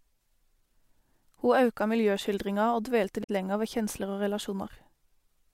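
Damaged data in a compressed stream shows up from 3.20 to 3.30 s, just before "lenger ved kjensler". For just under a tenth of a second the speech breaks into a short, garbled blip. Some of the compressed bytes in that stretch are corrupt, so the decoder cannot read those frames properly. It loses its place in the stream and has to search for the next valid frame header before clean decoding picks up again.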